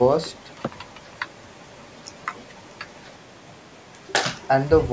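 There are no technical faults in this speech recording; the call microphone processing trims the lowest bass and leaves nothing above 8 kHz, as it normally does.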